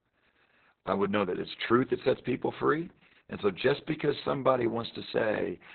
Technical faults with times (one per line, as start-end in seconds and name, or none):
0.00-5.75 Opus voice compression